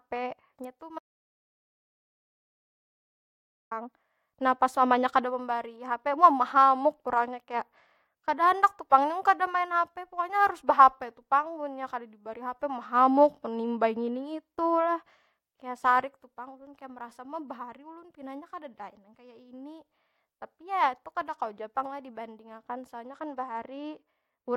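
Audio dropout to silence from 0.99 to 3.71 s: the speech cuts to silence, no room tone, for about 2.7 s, likely a lost input while recording continued. Bluetooth SBC bit pool drop from 7.16 to 8.17 s and again from 23.07 s to the end at 24.57 s: treble dulls and gritty quantisation noise rises, which fits the link falling from bit pool 31 to about 13, near 94 kbps.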